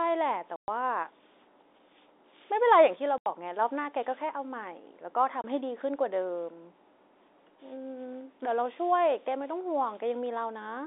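At 0.56 s the speech drops into dead silence until 0.68 s, then again from 3.18 to 3.26 s, and briefly from 5.42 to 5.44 s. That's packet loss filled with silence: the receiver got nothing for those stretches and played silence. The gaps of 120, 80 and 20 ms all fit 20 ms packets, and each has hard edges against the narrowband telephone sound of the G.711 line.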